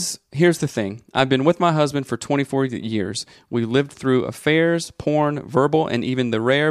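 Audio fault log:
No faults detected anywhere in the speech.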